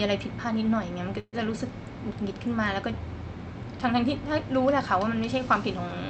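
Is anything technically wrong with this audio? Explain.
Yes. There is a call audio freeze from 1.19 to 1.35 s. The sound stalls there, and the last moment is stretched into a fading buzz or hiss that drops to near silence for about 50 ms. This is likely a stall in packet delivery that left the jitter buffer empty. The receiver filled about 134 ms with synthetic sound. When the audio resumes, it picks up where it stopped. Nothing is lost, but everything after it arrives about 134 ms late. The high end stops around 8 kHz, which fits a wideband Opus call path.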